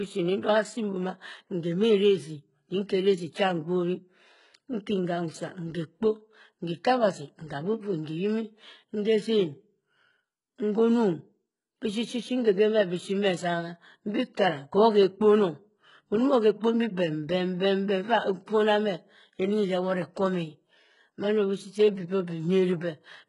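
From start to finish the speech carries heavy HE-AAC compression damage, likely from coding at a very low bitrate of around 12 kbps. The upper range is not the original treble. It is rebuilt from copied lower bands, so s sounds come out gritty, metallic and lispy, with harmonics that fail to line up. On a spectrogram the top band looks smeared and blocky above a visible seam, and everything stops cleanly at 11.1 kHz.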